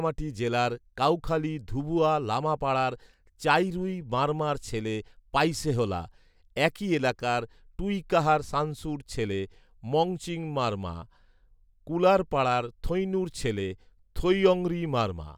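No technical faults are audible.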